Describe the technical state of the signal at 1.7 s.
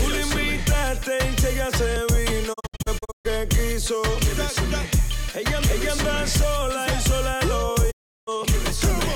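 At 1.7 s the signal is intact, with no audible dropout, distortion, glitch or other technical fault at that moment.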